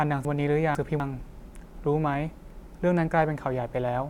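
From 0.25 to 1.0 s the speech is briefly scrambled by chunks out of order. A 250 ms piece that belongs at 0.25 s arrives two chunks late, so the two pieces that should follow it play first and it only appears at about 0.75 s. Hard joins fall at 0.25, 0.75 and 1.0 s. Unlike a dropout or a repeat, nothing is missing or doubled; the same sound is simply heard in the wrong sequence.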